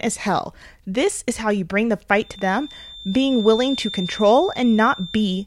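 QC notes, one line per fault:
2.17 s to end: feedback whistle. A thin, steady tone near 3.6 kHz sits roughly 15 dB below the speech, swelling and fading slowly in level. This is likely a loudspeaker-to-microphone loop held just at the edge of feedback, sustaining one frequency without building further.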